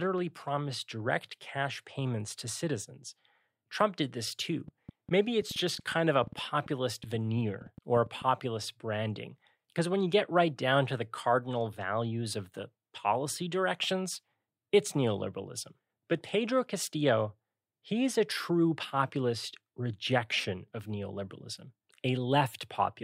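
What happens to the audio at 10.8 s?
At 10.8 s the speech runs on intact, with no dropout, click, distortion or other technical fault at that moment.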